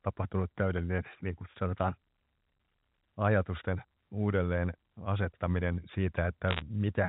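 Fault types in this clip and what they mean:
Bit errors on a digital phone line: flipped bits in the A-law telephone stream corrupt single samples, causing a quick burst of sharp ticks and crackle around 6.5 s.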